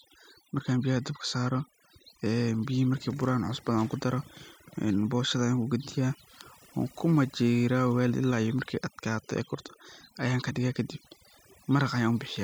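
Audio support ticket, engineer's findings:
Whole clip. Background gated to near silence with twinkling specks between phrases; quiet syllable edges dropping out. Component: noise reduction stage. Overdone noise removal: suppression set too aggressive, so individual frequency bands near the noise estimate are cut hard or muted outright, removing low-level speech detail along with the background noise.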